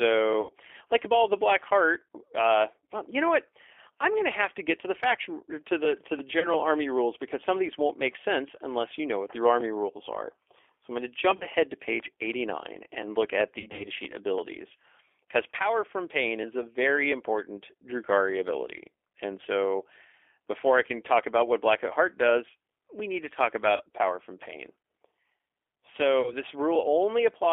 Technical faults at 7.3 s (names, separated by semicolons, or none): G.729 codec